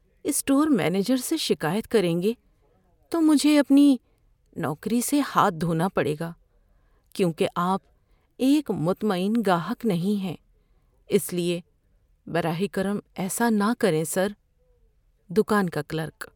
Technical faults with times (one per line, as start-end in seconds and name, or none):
none